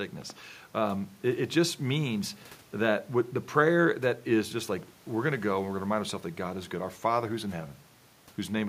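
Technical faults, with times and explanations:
No technical faults detected.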